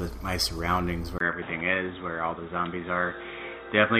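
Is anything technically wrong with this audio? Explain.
Yes. At 1.18 s the sound drops out for about 20 ms, and from there to the end the bandwidth is cut off, with nothing above 3.8 kHz. This is likely an input switched to a poorer device, such as a second microphone or a headset's call profile that passes a narrower band. The result is a dull, boxy tone at about the same loudness as before, with a faint new noise floor roughly 50 dB below the signal.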